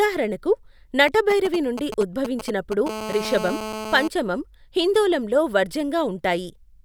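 From 1.08 to 2.88 s, GSM signalling bursts break into the speech: a galloping dit-dit-dit of ticks and brief rasps repeating at 217 Hz, roughly 10 dB below the voice. A nearby 2G handset is sending short clusters of radio pulses, the pattern of a phone negotiating with the network, and the audio circuitry rectifies them into audible clicks. On a spectrogram these appear as short vertical stacks of evenly spaced harmonics, gapped and grouped. The waveform shows clumps of sharp spikes between quiet stretches.

At 2.89 s the clusters give way to continuous GSM phone buzz, lasting until 4.08 s at about 8 dB below the speech. The transmitter is now bursting without pause, as it does during an active call. Each rectified pulse lands 217 times a second, producing a hard, raspy tone unrelated to the voice. A spectrogram shows an unbroken comb of horizontal lines at 217 Hz and its multiples reaching well into the kHz range. 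The waveform carries a steady train of square-edged pulses beneath the speech.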